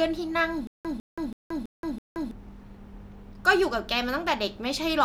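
Stutter with silent gaps from 0.67 to 2.31 s: a 152 ms fragment of the speech repeats five times, each followed by about 176 ms of dead digital silence, giving an even 328 ms cycle. This likely comes from a stalled player or stream replaying its last buffer while the intervening speech is lost.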